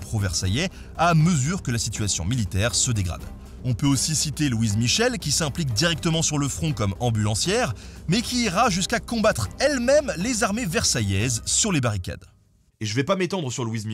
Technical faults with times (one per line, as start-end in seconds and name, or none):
none